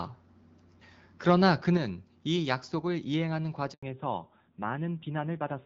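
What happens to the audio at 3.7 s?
At 3.73 s there's a handover gap: the call jumps networks, no frames arrive, and the sound drops out for about 100 ms until 3.83 s.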